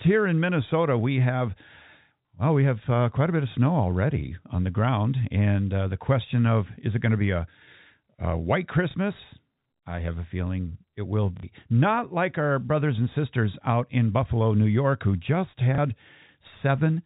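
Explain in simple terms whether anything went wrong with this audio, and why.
Yes, something went wrong: packet loss with last packet repeated. Three times, chunks of the speech never arrived, and the receiver filled each gap by replaying the last chunk it had. You hear a small blip at 8.91 s after "a white", a longer 60 ms stutter at 11.37 s after "a feeling it will", and another blip at 15.75 s after "who just".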